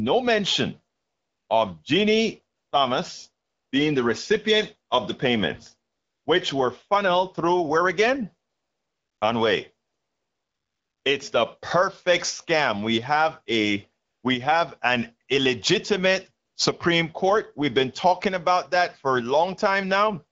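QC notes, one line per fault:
0.95–1.49, 2.55–2.71, 3.45–3.71, 5.91–6.25 (after "recipient of the payments"), 8.49–9.21 (after "funneled through where again"), 9.87–11.03, 14.05–14.23, 16.45–16.55 s (after "we have an illegitimate"): AMR comfort noise. Speech frames stop in each pause, lasting from 0.1 to 1.16 s, and the receiver substitutes a smooth synthetic hiss for the real background. On a spectrogram each gap becomes a flat, featureless noise band with abrupt edges. On the waveform it is an even low-level floor that switches in and out.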